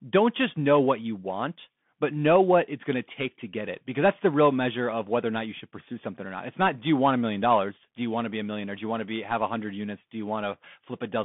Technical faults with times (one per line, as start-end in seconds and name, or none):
0.00-11.24 Bluetooth CVSD headset codec